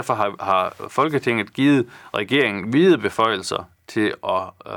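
Speech with hard clipping at 0.10–0.60 s, 0.98–1.30 s, 2.16–2.46 s and 2.88–3.56 s. The signal overruns a stage's ceiling by about 1 to 2 dB, so peaks are flattened, adding high harmonics heard as brief crackle on peaks.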